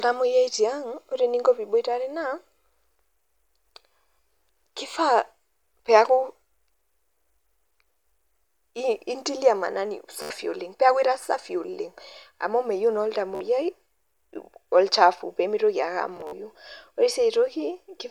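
Bluetooth stutter hits at 10.22 s after "intilia maanani" for 80 ms, at 13.35 s for 53 ms, and at 16.17 s after "olchafu pee mitoki ake", scattered across 160 ms. Late packets make the receiver loop a tiny slice, so you get a buzzy stutter before the audio skips ahead.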